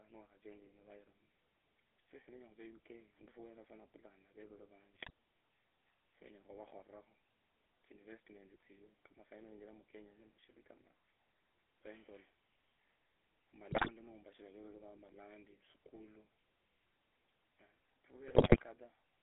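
From start to finish the speech carries the sound of the GSM full-rate codec. The band runs only from about 300 Hz to 3.4 kHz, and the voice has the buzzy, gravelly grain of a coder that rebuilds the vocal tract from a filter model fed by a sparse pulse excitation. That damage is plainly audible and fits the 13 kbps full-rate scheme.

GSM bit errors then break through three times, at 4.95 to 5.10 s, 13.68 to 13.91 s and 18.28 to 18.63 s. Corrupted filter, pitch and gain parameters reach the decoder and distort the spectrum or level frame by frame, giving short squawks, pops and gargling. Each burst is longer than the last, with error rates rising from about 2 to 4 percent across roughly 8, 11 and 17 damaged frames.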